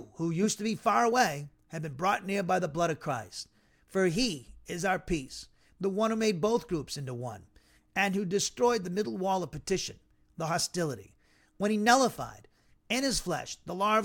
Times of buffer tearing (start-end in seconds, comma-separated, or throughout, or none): none